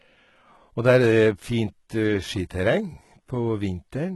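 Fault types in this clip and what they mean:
HE-AAC compression: the treble is likely rebuilt by band replication, sounding gritty and lispy on s sounds with nothing above 11.8 kHz, unlike a plain low-pass.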